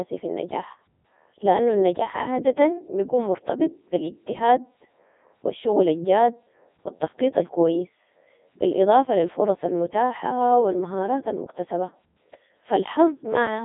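Codec 2 vocoder damage throughout: speech rebuilt from sine waves sounds robotic and buzzy, not just muffled as with band-limiting; nothing above 3.8 kHz, which fits 3.2 kbit/s.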